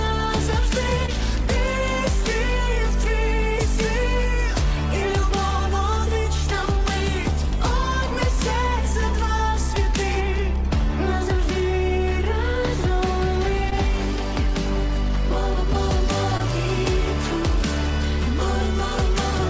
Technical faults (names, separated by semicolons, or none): short concealed packet loss